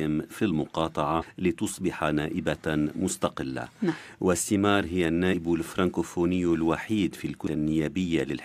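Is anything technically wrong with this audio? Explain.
Yes. The speech carries damaged data in a compressed stream at three moments: 1.21 to 1.23 s, 5.32 to 5.34 s, and 7.46 s. At each point some of the coded bytes were lost, overwritten or mixed with foreign data. The decoder misreads those frames, loses its place in the stream and hunts for the next valid frame header. Each error lasts only about 20 ms or less and is heard as a brief chirp or squawk.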